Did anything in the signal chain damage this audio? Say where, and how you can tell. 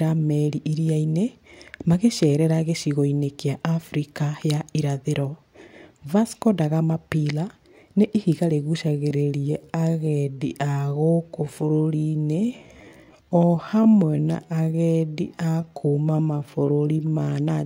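Yes. Right after "nĩ ihiga", at 8.85 s, the speech suddenly drops to about 0.63 times its pace and stays there until 17.37 s, yet the pitch doesn't sag at all. Slowed passages like this drag, which is the giveaway for a time-stretched section. The likely cause is a stretch step in post-processing before storage: the software filled the extra length by repeating short slices of the waveform rather than resampling, so the timing changed while the pitch held.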